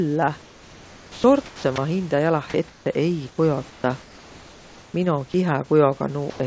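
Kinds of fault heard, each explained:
Comfort noise in place of the background: In six pauses, the longest lasting 0.82 s and 0.92 s, the real room background turns into a steady, featureless hiss about 1 to 6 dB quieter. This is likely from discontinuous transmission, and no speech is lost.
Sound dropped by the voice detector: Just before "ma hindä", near 1.46 s and 1.76 s, about 80 ms and 20 ms of speech give way to that same steady noise, likely because the voice detector took it for background. Unlike comfort noise, actual sound goes missing.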